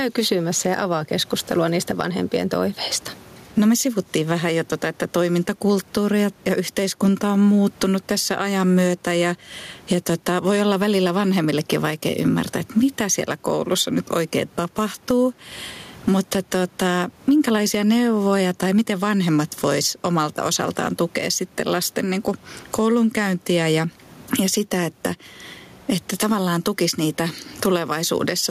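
Speech with gain pumping throughout, a gain swing of roughly 15 dB; the room noise sits about 39 dB below the speech. The likely cause is input gain set far too high with a fast limiter clamping it back down. On a waveform the peaks look flattened to a near-constant height.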